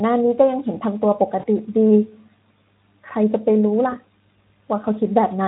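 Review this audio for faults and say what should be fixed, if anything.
VoIP packet loss concealed by the speech codec occurs twice, from 1.39 to 1.47 s and from 3.89 to 3.94 s. In each, the decoder fills the missing stretch (about 40 ms, then about 20 ms) by repeating its last pitch and filter at falling gain. The result is a brief buzzy tone or coloured noise that fades and stays weak after the stream resumes. A plain dropout would instead be silence or a click. The light Speex coloring at 15 kbps elsewhere is a separate, steady texture. To prevent this, send the audio over a more reliable link with a larger jitter buffer, or add forward error correction so lost frames can be rebuilt.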